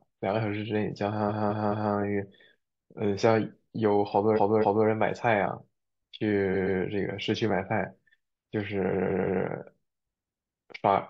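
Repeated frames stutter the speech at 1.28–1.92 s (213 ms block, three extra plays), 4.35–4.86 s (256 ms, two), 6.53–6.78 s (128 ms, two) and 8.92–9.43 s (171 ms, three). The decoder replays the same compressed stretch, so identical spectrogram blocks sit side by side.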